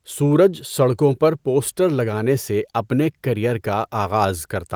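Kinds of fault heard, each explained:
No technical faults can be heard in this recording.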